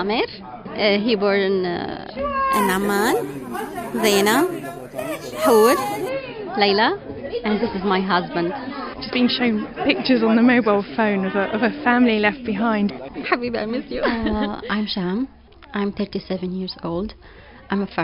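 From 2.53 to 6.09 s, imaging from sample-and-hold upsampling: samples were repeated without filtering, which points to an 11 kHz source raised to 48 kHz. This leaves a mirrored band spanning 5.5 to 11 kHz, about 16 dB down, heard as metallic fizz.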